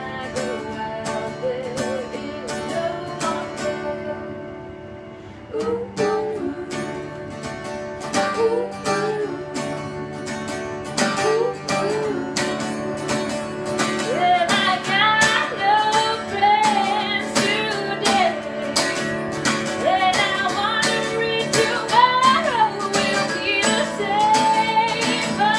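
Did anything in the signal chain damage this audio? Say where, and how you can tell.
No, nothing in the signal chain stood out as damaging this audio on listening.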